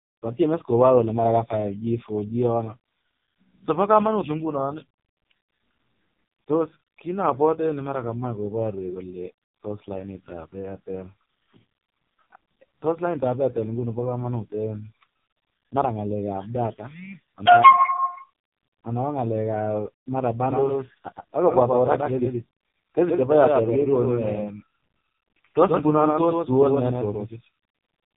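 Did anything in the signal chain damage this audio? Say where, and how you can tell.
Yes. An AMR narrowband mobile codec runs through the whole speech clip at the codec stage. Nothing above about 3.8 kHz survives, and the heavy buzzy, synthetic texture fits AMR-NB's lowest 4.75 kbps mode, where too few excitation pulses drive its vocal-tract model.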